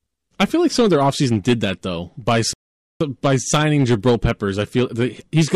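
Throughout the speech, the loudest moments crackle and break up, with an added edge of high-frequency distortion riding on the peaks. This is hard clipping: the signal was driven about 8 dB beyond what one stage in the chain could pass, so the tops of the waveform were sliced flat. Only a few percent of samples go over, but each flattened crest generates harmonics high in the spectrum, and those are what give the peaks their crackle.

From 2.53 s to 3.01 s, right after "did that though by", the audio drops to silence, then picks up with "by signing" exactly where it left off. Nothing is skipped or repeated. This is a rebuffering stall: the player used up the audio it had downloaded and paused until more arrived. The gap adds about 0.47 s to the clip without removing any of the original sound.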